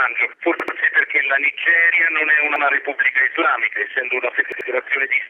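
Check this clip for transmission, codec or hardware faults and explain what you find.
Three brief stutters reveal a repeated buffer fault. At 0.60–0.77 s, 2.56–2.65 s and 4.52–4.69 s, an 85 ms slice plays again with hard joins, two extra times, then once, then twice. New audio arrived late, so the device replayed its last buffer, which fits a 4096-sample buffer.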